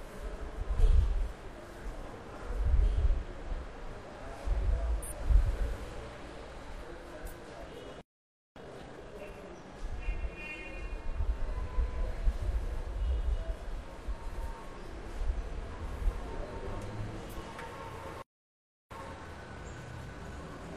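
Compressed frames skipped at 1.81, 5.02, 6.18 and 7.71 s: whole blocks of encoded audio never reached the output, so the sound jumps forward by roughly 100, 200, 100 and 50 ms. The gaps fit frames of about 46 ms.

Playback stall from 8.01 to 8.56 s and again from 18.22 to 18.91 s: the output falls silent mid-flow for 0.55 s and then 0.69 s before resuming. The likely cause is the player running short of data or its playback thread being held up.

Time-compressed catch-up follows each stall, from 8.56 to 9.64 s at 1.5 times speed and from 18.91 s to the end at 1.15 times. The player trims its backlog by cutting out small slices and cross-fading across them. The sound is hurried at unchanged pitch.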